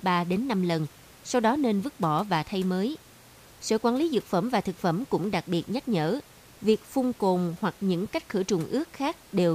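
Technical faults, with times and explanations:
Nothing technical goes wrong in this speech clip, and the only thing underneath it is a faint bit of room sound sitting about 26 dB below the talking, which is just part of the space it was recorded in.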